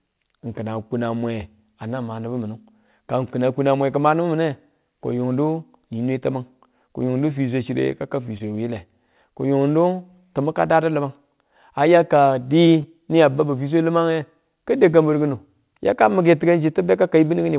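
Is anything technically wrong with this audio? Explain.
Yes. At 8.38 to 8.42 s, and again at 12.82 to 12.86 s between "a ya ka" and "ni a babu fi", the speech briefly smears into a wobble. This is short concealed packet loss: about 20 ms never arrived, so the receiver extended the preceding sound and blended back, all heard through a call path whose 4 kHz ceiling suggests G.711 mu-law.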